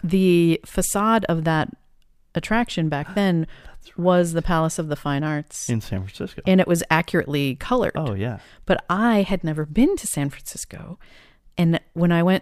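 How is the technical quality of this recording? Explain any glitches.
No glitches to report here, as nothing in this speech recording jumps out as a technical problem on a listen.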